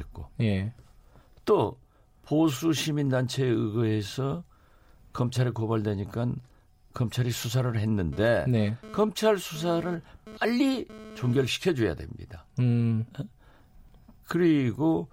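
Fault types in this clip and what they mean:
GSM phone buzz: The audio circuit rectified a 2G phone's data bursts, adding a raspy 217 Hz buzz that comes and goes, about 17 dB below the speech.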